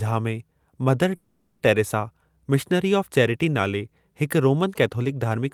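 At 1.15 s the speech stops moving forward and turns into a fading buzzy hiss until 1.62 s. This is a call audio freeze. Delayed packets likely drained the jitter buffer. The receiver stretched the last sound for 0.44 s. Speech resumes where it stopped, with nothing lost.

From 4.76 s to the end come GSM signalling bursts. A nearby 2G phone is signalling, and the audio circuit rectifies its radio bursts. They sound like a galloping dit-dit-dit of short 217 Hz buzzes, faint and well below the speech.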